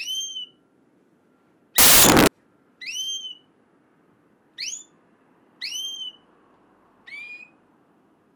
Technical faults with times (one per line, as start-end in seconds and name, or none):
1.78-2.27 samples built from the wrong bytes